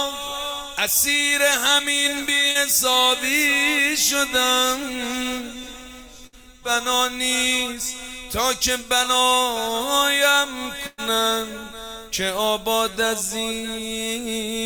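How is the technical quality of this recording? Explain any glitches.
The recording has three dropouts from network packet loss, each patched over by the receiver's concealment.

At 2.51 to 2.57 s there is a short concealed packet loss. About 40 ms of audio never arrived, and the decoder filled 33 ms of it by extending the preceding sound before crossfading back. It is heard as a brief smear in the sound.

Bursts of packet loss occur at 6.27 to 6.35 s and at 10.87 to 11.00 s, with about 60 ms and 120 ms missing. The receiver stretched the last sound across 58 ms and 113 ms, fading it down, so each gap becomes a held, decaying tone or hiss before the audio resumes with that stretch skipped.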